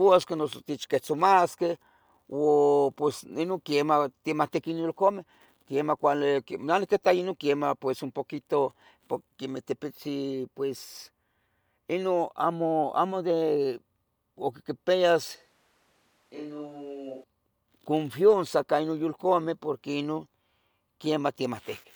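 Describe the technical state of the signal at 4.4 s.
At 4.4 s the speech signal is intact, with no audible fault at that moment.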